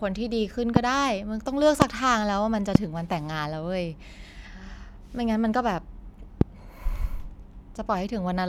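A voltage spike, likely from a switch, plug or static discharge, enters the chain four times, at 0.76–0.79, 1.82–1.84, 2.75–2.78 and 6.41–6.44 s. Each produces a single loud pop, roughly 25 dB above the speech, which continues underneath.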